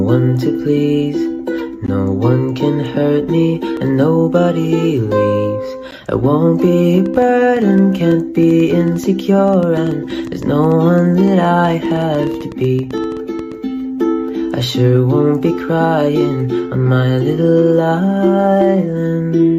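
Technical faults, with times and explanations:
7.06 to 13.53 s, train of clicks: about 50 sharp, similar ticks at roughly 7.6 per second, unevenly spaced, peaking near the level of the sound itself and heard in pauses too, likely interference or a faulty connection or power supply. They show as thin full-height vertical lines on a spectrogram and narrow spikes on the waveform.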